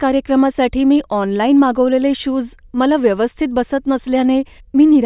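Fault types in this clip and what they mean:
No faults can be heard.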